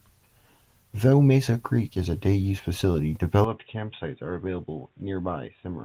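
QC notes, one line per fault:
3.44–5.85 s, input switched to a poorer device: at 3.44 s the speech abruptly turns dull and boxy, with nothing above 3.8 kHz. The level drops by roughly 10 dB, and a faint new background noise appears some 40 dB below the speech. There is no gap at the change. The likely cause is the recording moving to a narrower-band microphone or headset call profile, whose own response, gain and noise floor carry through to the end.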